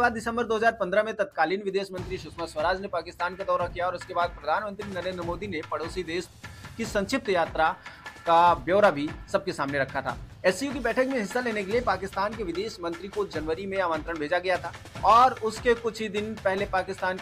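No technical faults turn up anywhere in this recording. Nothing in it points to a dropout, glitch or other defect in the signal path.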